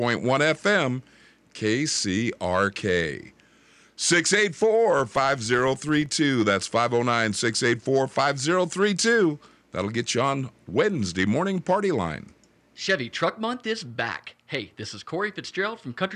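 A filter restarted on every block, losing its state at each boundary of what fits a 2048-sample block, so from 4.99 to 6.10 s this speech carries a level-following buzz at about 23.4 Hz.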